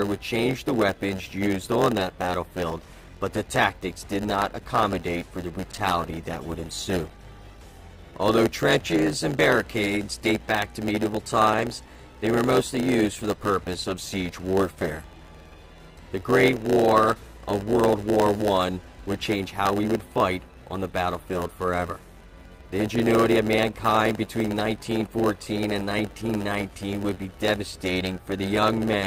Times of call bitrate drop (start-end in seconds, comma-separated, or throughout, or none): 5.72-8.99